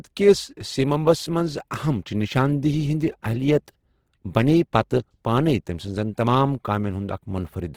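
Across the whole clip the speech has a rough, grainy coating, with its tones turned noisy rather than clean. It's the sound of Opus compression, likely in its CELT music mode, starved of bits: each band's energy is kept, but the fine detail is swapped for folded or noise-filled content, which fits a low rate around 16 kbps. The damage is plainly audible, even though the band still reaches up to about 20.2 kHz.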